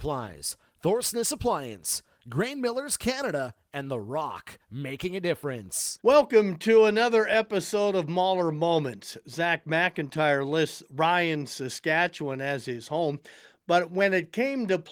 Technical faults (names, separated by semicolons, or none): none